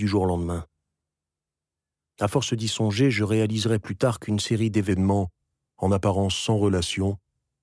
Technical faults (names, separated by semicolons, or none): wrong sample rate